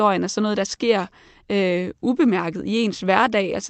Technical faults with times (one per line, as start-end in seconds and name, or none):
0.00-3.70 clock drift between sender and receiver
0.42-3.44 repeated timing corrections